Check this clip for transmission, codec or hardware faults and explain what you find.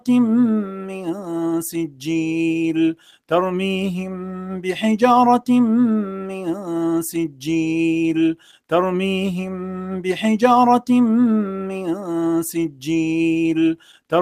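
There's a problem here, and it's processing, not transmission: a speech-style noise suppressor is running over audio that isn't speech.

The noise suppressor applied to music or sounds is active for the whole clip. It treats steady, sustained material as noise and turns it down, with gain swinging by roughly 10 dB. Attacks get through, but held parts and tails keep dipping, so the sound pumps and thins.

Sound cut by the noise suppressor shows up in three stretches: 0.0–4.7 s (around two seconds of it actually hit), 6.04–10.0 s (about a second and a half), and 11.46–12.85 s (under a second). Each time, the suppressor decided the sound was noise and pulled it down by about 10 dB at the deepest point. Sustained and decaying sound sinks or gets clipped short, while sharper onsets mostly survive.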